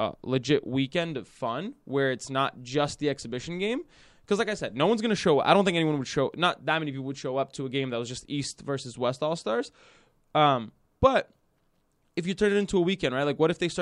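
Listening to the recording of speech, nothing stood out as a technical problem at any point.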